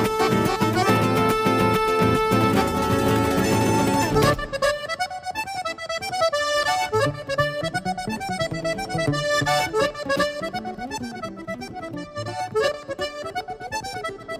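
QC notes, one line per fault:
No technical faults are audible anywhere in the signal.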